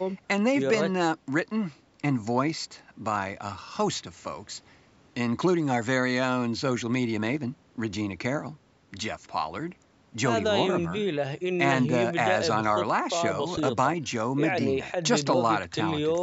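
No technical faults can be heard in this speech recording, which has passed through a call's microphone processing that trims the lowest bass and leaves nothing above 8 kHz, as that processing normally does.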